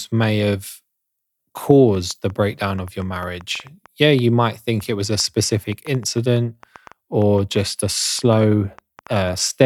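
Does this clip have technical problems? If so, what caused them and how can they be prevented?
Yes. A train of clicks runs from 1.95 to 9.3 s: about forty uneven pops, roughly 4.9 per second, about as loud as the speech, likely from interference or a faulty connection or power supply. They show as thin vertical broadband lines on a spectrogram and sharp spikes on the waveform. To prevent this, secure the cables and power, and keep the recording gear away from other equipment.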